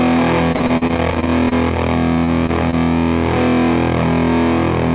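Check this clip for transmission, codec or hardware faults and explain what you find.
Three kinds of fault are audible: clipping on loud peaks through the whole clip, a choppy stretch early on, and three brief smears shortly after. The band stops at 4 kHz, which fits a narrowband G.711 mu-law call path.

Hard clipping, throughout: peaks crackle because the signal overdrives a stage by about 4 dB. Roughly 4% of samples are cut flat, which adds high harmonics.

Repeated packet loss (robotic sound), 0.52 to 1.53 s: the sound turns choppy, with pieces missing. Packets kept going missing, with gaps up to 41 ms, and the receiver filled about a quarter of that stretch by extending the preceding sound.

Short concealed packet loss, at 2.24 to 2.30 s, 2.46 to 2.51 s and 2.71 to 2.75 s: each is a brief smear or wobble. About 20 to 40 ms failed to arrive in time, and the decoder filled the hole by continuing the last sound.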